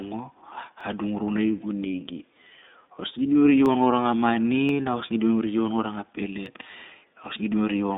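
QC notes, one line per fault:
Throughout: iLBC codec. The speech is confined to a narrow telephone band, roughly 200 Hz to 3.7 kHz, with nothing above 4 kHz, and the codec damage is plainly audible. Each 20 ms frame is coded on its own, which gives a slightly rough, synthetic edge. On a spectrogram the energy stops flat at the band edge.
0.81, 3.66, 4.69 and 6.46 s: dropped samples. Each is a single sharp click where a fraction of a millisecond of audio is missing. The waveform jumps straight to a later value, which is heard as a click and seen as a thin vertical line across the spectrogram. The likely cause is a sample-level gap in the stream.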